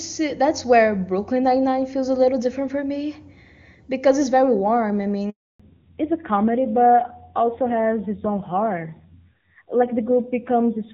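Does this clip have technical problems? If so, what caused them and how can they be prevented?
Yes. Handover gap, 5.30 to 5.60 s: right after "it's very warm I" the speech cuts out for 300 ms. The call was passed from one network to another, and no speech frames reached the receiver during the switch, so that stretch is simply missing. Keeping the phone on one stable network, or using networks that support seamless handover, prevents this.

Fallback to narrowband, 5.60 s to the end: once the new link starts, the clear HD Voice sound of the first half is replaced by a duller, rougher one with nothing above 4 kHz. The call dropped to an older narrowband codec, likely AMR-NB at a low rate near 7.4 kbit/s, which cannot carry the upper band. Ensuring both networks and handsets support wideband calling end to end avoids it.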